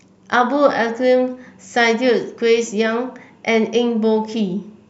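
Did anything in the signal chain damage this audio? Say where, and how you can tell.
No, nothing in the signal chain audibly damaged this speech recording; every stage from capture to playback leaves the signal intact.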